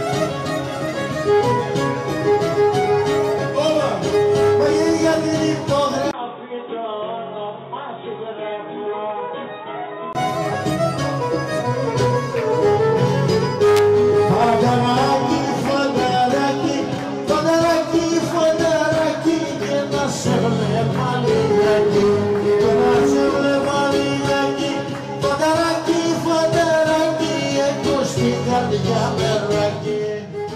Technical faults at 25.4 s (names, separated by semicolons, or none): none